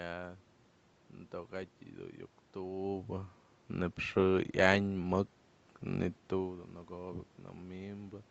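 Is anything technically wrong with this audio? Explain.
No, nothing here points to a technical problem; the changes in level around 3 s and 6 s are just the talker shifting relative to the microphone, and the room noise in the background belongs to the space itself.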